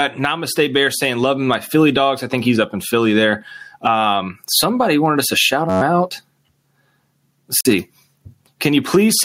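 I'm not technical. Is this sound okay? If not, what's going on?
No. Throughout, there is gain pumping: loud and soft parts end up closer in level and the sound is squashed, likely from input gain set too high with an automatic limiter reacting.

From 5.70 to 5.81 s, a system hang loop: a slice about 11 ms long repeats, making a brief buzz near 94 Hz while audio is lost.

From 7.61 to 7.67 s, a Bluetooth dropout: the sound cuts to silence for about 46 ms, likely from wireless packets arriving late, then resumes further along.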